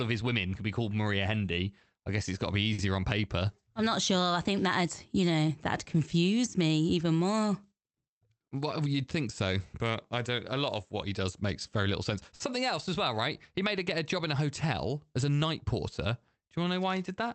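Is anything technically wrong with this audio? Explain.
Yes, there are two kinds of glitch, both from the receiving side of the call. The audio itself went through what sounds like Opus at about 32 kbps, with the top end stopping near 8 kHz.

Short stall from a late packet, at 2.73–2.80 s and again at 12.35–12.42 s. Each time a packet arrived late and the jitter buffer ran dry, so the receiver stretched the last bit of sound by about 50 ms until the data showed up, then picked up where it left off. Nothing is lost, but that moment hangs a touch too long, with a faint buzzy or sagging quality.

Jitter buffer speed-up, from 8.54 to 8.95 s. The buffer had built up more audio than it wanted, so the receiver trimmed it by cutting out tiny slivers of one or a few pitch periods, over and over, shaving off around 50 ms in total. Pitch stays put, but the speech plays at about 112% speed, so that stretch sounds slightly rushed.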